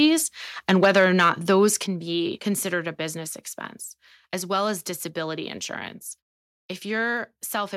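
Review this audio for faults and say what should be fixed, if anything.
Microphone overload from 0.69 to 1.65 s: peaks are flattened, adding a harsh crackle to the loudest syllables, likely from input gain set about 4 dB too high, clipping around 2 percent of samples. Lower the input gain so speech peaks stay well below full scale.

Microphone volume stepped down at 0.85 s by about 2 dB and at 1.86 s by about 6 dB, just before "be considered a business": the level drops abruptly in single steps, likely automatic gain cutting the input after clipping. Setting a correct input level beforehand prevents the software from making these sudden corrections.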